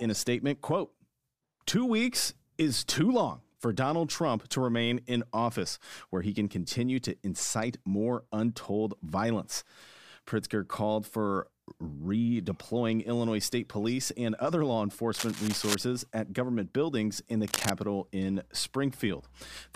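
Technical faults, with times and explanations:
15.14–15.75 s and 17.48–17.71 s, cable scratch noise: rough rustling bursts after "and other law" and "government buildings in the", likely a worn cable or connector moving.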